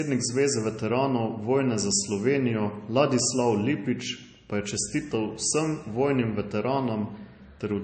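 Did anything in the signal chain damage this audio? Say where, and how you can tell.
Yes, at the codec stage: the speech has nothing above 8.3 kHz throughout, likely low-bitrate audio saved at a high bitrate, so the later encode keeps earlier artefacts and cut-off.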